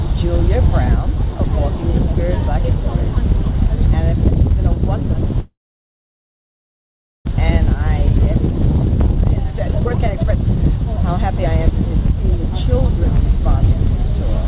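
From 5.4 to 7.29 s, the sound trails into a fading buzz or hiss, then near silence. A long network dropout is the likely cause, and about one second is lost outright rather than patched over.

From 8.98 to 10.57 s, a jitter buffer speed-up hurries the sound to 144% speed at unchanged pitch, cutting roughly 0.7 s. Faster playback by resampling would raise the pitch.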